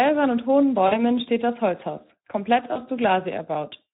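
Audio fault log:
throughout: Speex codec. Coarse CELP coding leaves the speech hoarse and noisy, fitting roughly 11 kbps; the spectrogram shows smeared harmonics.
0.87–1.01 s and 2.73–2.82 s: VoIP packet loss concealed by the speech codec. About 40 ms is lost after "und hohen", before "steht das", and about 20 ms at 2.73 s. The decoder stretches its last pitch and filter into a fading buzzy tone or coloured noise, visible as a sagging waveform envelope.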